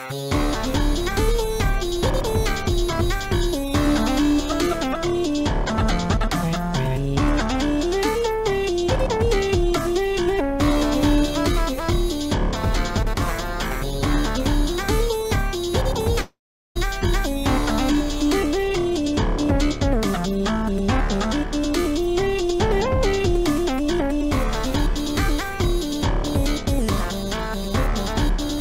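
At 16.21 s the sound gives way to a long network dropout lasting until 16.77 s, with about 0.54 s of audio missing. Its likely cause is a stretch of packets that never arrived. The receiver stretches the last sound into a fading buzz or hiss for a short moment, then about 0.39 s of silence follows before the audio resumes with that portion lost. On a spectrogram the harmonics smear flat and fade, leaving a dark gap. The waveform shrinks to a flat line.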